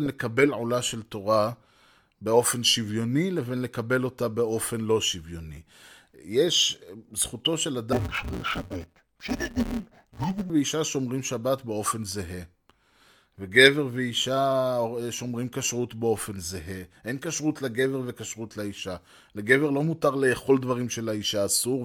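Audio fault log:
7.93–10.50 s: interleaved audio read as planar. Sound turns dull and robotic, buzzing at 172 Hz. Each 5.8 ms block, fitting 256 samples, splits wrongly.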